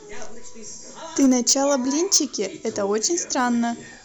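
Speech with hard clipping in three bursts, 1.19–1.75 s (about 7 dB over), 2.12–2.18 s (about 11 dB) and 3.05–3.47 s (about 4 dB). Flattened peaks give a brittle crackle, unlike soft saturation's rounder, gradual thickening.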